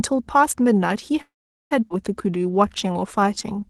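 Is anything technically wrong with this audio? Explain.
Yes, there are three faults in this speech, all typical of audio passing through a call path with an Opus-style codec whose top end stops near 12 kHz.

From 1.21 to 1.73 s there is a call audio freeze. The most likely cause is packets stalling in transit until the jitter buffer ran dry. The receiver stretched the last sound into a brief decaying fill, and then about 430 ms of that half-second insertion is plain silence. Playback resumes exactly where it stopped, so nothing is lost. The speech has simply been pushed back by about 0.5 s.

At 1.89 s there is a skip ahead. With later audio already waiting, around 0.4 s of audio was dropped. The join is nearly seamless, with only a tiny bridging fill of about 12 ms. The two sides of the cut butt together, so a chunk of speech simply vanishes and the delivery sounds abruptly truncated.

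From 2.27 to 3.66 s there is a jitter buffer slow-down. With its reserve depleted, the buffer rebuilt delay by repeating individual pitch periods and short slices of pauses over and over. This adds 176 ms in total and drops playback to 88% speed while the pitch stays unchanged. The result is speech that sounds dragged out, with stretched vowels.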